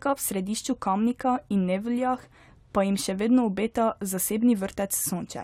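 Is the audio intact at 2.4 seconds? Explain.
Yes, the speech at 2.4 seconds is intact, with no dropout, click, distortion or other fault at that moment.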